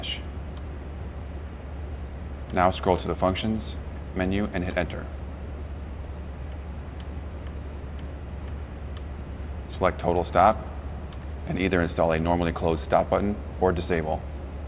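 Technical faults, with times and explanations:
No technical faults can be heard anywhere in this audio.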